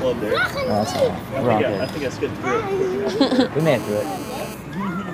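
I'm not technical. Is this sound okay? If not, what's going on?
No. From 3.60 to 4.54 s there is GSM phone buzz. A nearby 2G phone on a call pulses its radio 217 times a second, and the audio circuitry turns those pulses into a steady, harsh, raspy buzz. Mains hum sounds smooth and low, but this is gritty and buzzing.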